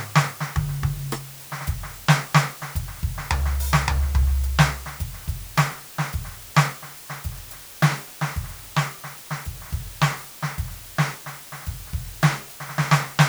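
From start to finish the music carries low bit depth with dither. The samples are held to about 7 bits, and noise was mixed in before rounding, so the rounding error turns into a steady, even white hiss sitting only around 20 dB below the music. Undithered reduction would leave gritty distortion that follows the signal and chatters on quiet decays; here the hiss stays constant and the tones themselves stay clean.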